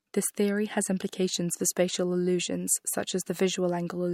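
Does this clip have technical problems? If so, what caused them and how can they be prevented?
No, there are no technical problems in this clip.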